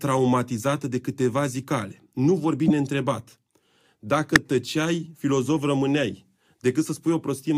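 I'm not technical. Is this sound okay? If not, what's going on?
No. There are two brief glitches from a corrupt frame decoded, at 2.67 to 2.71 s and at 4.36 s, just before "tăceai filozof rămâneai". Damaged compressed data was played anyway.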